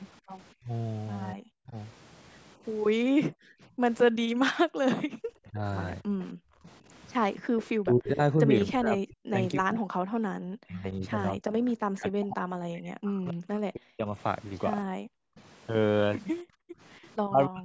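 At 0.59 to 1.76 s the talker's speech is pulled down in short pieces, around half a second in total, dipping by something like 40 dB at its deepest. This is speech suppressed in double talk, likely the result of both sides talking at once. The echo canceller cannot separate the near talker from the loudspeaker echo and attenuates everything it hears. The same pattern returns at 5.49 to 6.04 s, shallower at roughly 20 dB and lasting only a fraction of a second. From 7.83 to 15.18 s it is the longest episode, with about five seconds of the talker cut or muted by up to roughly 40 dB. A final brief dip comes at 17.29 to 17.64 s.

Between 3.06 and 5.21 s the room sound itself drops out, by about 40 dB at its deepest and for roughly a second in total. This is background gated by the echo canceller: while the loudspeaker plays, the canceller clamps the microphone, and the room tone vanishes until it releases. 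It happens again at 6.33 to 7.55 s for about half a second, and at 16.43 to 16.8 s.

From 6.21 to 7.67 s there is an echo leak. A copy of the voice trails the original by 272 ms at roughly 15 dB below it, heard as a faint, delayed repeat. The echo canceller on the loudspeaker side likely did not remove all of what its microphone picked up, so the residue came back down the line.

The call's microphone processing trims the lowest bass, and the audio carries nothing above 8 kHz.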